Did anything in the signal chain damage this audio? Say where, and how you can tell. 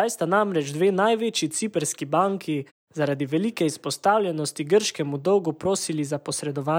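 No, nothing in the chain has damaged this speech, and the only processing audible is the background dropping to silence in the pauses and returning in time for each next sound, losing only very quiet sound.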